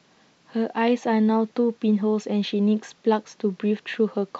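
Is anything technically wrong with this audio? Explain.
No, nothing technically wrong here.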